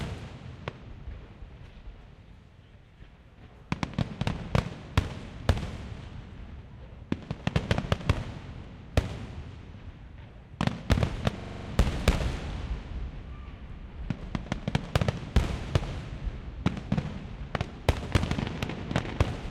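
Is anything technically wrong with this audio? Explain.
Yes. From 11.39 to 11.69 s, a system hang loop repeats one 42.7 ms slice (fitting a 2048-sample buffer) seven times at 23.4 Hz as the hardware recycles its buffer while the system is stalled. Unlike a dropout, the repeats are identical.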